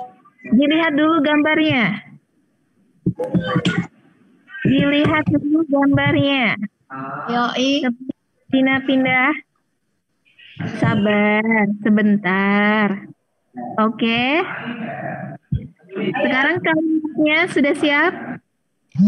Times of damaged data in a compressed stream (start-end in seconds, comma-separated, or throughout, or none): none